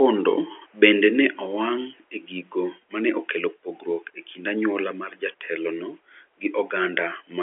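No technical faults are audible.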